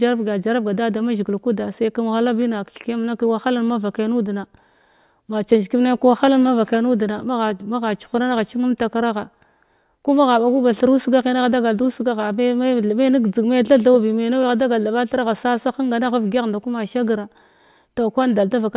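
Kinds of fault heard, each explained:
Nothing stands out here; the speech comes through without any audible technical faults.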